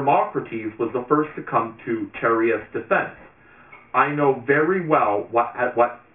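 Aliasing runs through the whole clip. The sample rate was lowered without an anti-aliasing filter first. Content above the new limit folds back around 3 kHz, which fits a drop from 48 kHz to 6 kHz. The folded energy lands on unrelated frequencies, roughly 20 dB below the sound. Bright, hissy parts turn gritty and metallic. The spectrum stays dense right up to 3 kHz, then stops dead.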